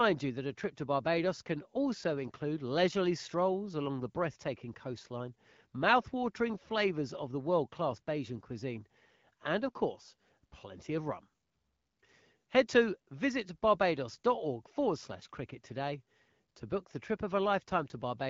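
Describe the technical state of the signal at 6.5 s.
At 6.5 s the speech is intact, with no fault; it passes through the AMR wideband (HD Voice) codec at 12.65 kbit/s as normal.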